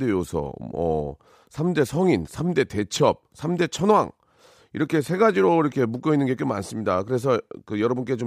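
A short speech recording with nothing technically wrong to point out anywhere in it.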